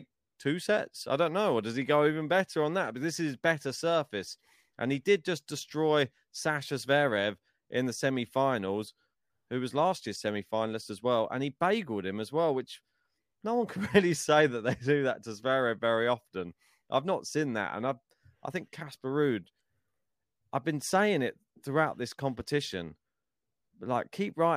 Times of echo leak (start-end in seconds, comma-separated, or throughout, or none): none